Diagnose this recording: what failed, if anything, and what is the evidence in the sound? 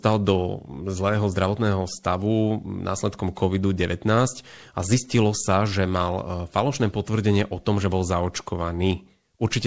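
Nothing stood out on listening: the speech came through a call path whose content stops at about 8 kHz, which fits a wideband codec such as G.722 at 64 kbps, and no failure could be heard anywhere in the recording.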